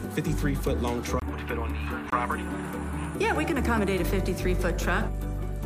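A short hole interrupts the audio at 1.20 to 1.22 s and again at 2.10 to 2.13 s. Each is a block of digital silence about 23 ms long: the signal drops straight to silence and returns with no fade. The identical length of both gaps fits a 1024-sample buffer at 44.1 kHz that was not filled in time, so it went out empty.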